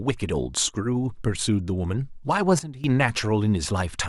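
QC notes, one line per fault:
2.59–2.84 s, sudden gain jump: the level drops by about 14 dB in a single step and recovers at 2.84 s, with speech and background noise falling together. Unlike a fade or compressor action, there is no ramp, which points to a gain setting likely applied without smoothing.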